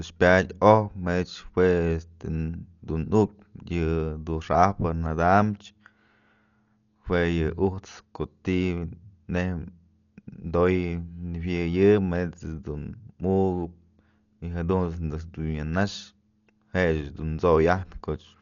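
Dolby Digital compression, throughout the clip: the speech stops dead at 6.9 kHz, leaving it dull, and a rough, fluttering noise clings around voiced tones. This likely comes from an AC-3 style encoder starved of bits, which fits a rate near 48 kbps. To save data it cut the band short and gave many frequency lines no detail bits, so the decoder filled those gaps with noise, heavily damaging the sound.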